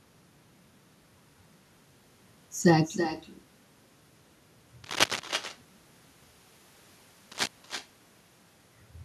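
With no echo canceller on the far end of the call, the loudspeaker playback leaks into that side's microphone and returns across the network, so this speech recording is shadowed throughout by a thinner copy about 10 dB down and trailing by roughly 300 ms. A worn cable, connector or control was likely moved at two points, its contact resistance jumping about and producing cable scratch noise: dense, uneven rustling bursts somewhat louder than the speech, from 4.84 to 5.2 s and from 7.32 to 7.47 s.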